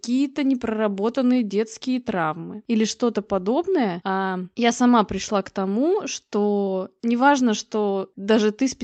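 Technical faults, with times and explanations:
Throughout: clock drift between sender and receiver. The sender's clock runs roughly 3% slow against the receiver's, so the jitter buffer keeps draining and the receiver has to pad it. That leaves small, unevenly spaced timing hiccups across the whole clip.
0.10 to 8.44 s: repeated timing corrections. The receiver keeps repeating short pieces to cover the slow sender, adding around a fifth of a second overall and running the audio at about 97% speed. The edits all go the same way but land unevenly. The call codec's top end stops around 8 kHz, which fits an Opus call path.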